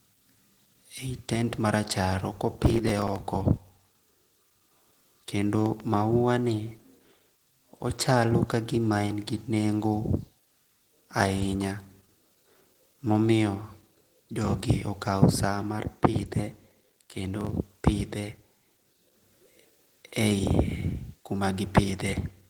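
A speech clip whose whole length has plainly audible low-bitrate coding damage, with the full audio bandwidth still present (nothing above 20.1 kHz). The speech sounds muffled and hoarse, and sustained sounds come out grainy and rough rather than hollow or swirling. That texture sets it apart from MP3-style damage and points to Opus running in its hybrid speech mode, most likely at a low rate near 16 kbps. In its music mode the codec keeps each band's energy but fills detail with folded or noisy content. Processor overload crackle appears twice, from 2.59 to 3.20 s and from 16.14 to 17.50 s. Each burst is a gritty tearing that rides on the speech and then stops. It comes from a few dozen missed deadlines, each skipping a tiny slice of audio, which fits buffers well under a millisecond long. The stretch of repeated hard-edged gaps separates it from a single click or pop. A loud pop occurs at 5.66 to 5.82 s as two sharp pops in quick succession, about 5 dB above the speech, while the speech carries on underneath. 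This is likely a sudden voltage step or pulse added to the signal, as from a plug, switch, static or driver glitch. Being isolated and paired rather than a sustained rough burst distinguishes it from the overload crackle.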